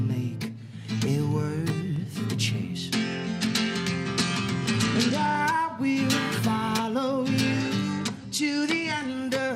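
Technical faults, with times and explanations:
2.76–5.41 s and 7.92–9.09 s, Bluetooth SBC bit pool drop: the treble turns dull and a gritty grain rises, then clears. A congested link forced a lower bit rate, which fits a bit pool falling from 28 to 12 (about 96 kbps), starving the upper sub-bands and coarsening the rest.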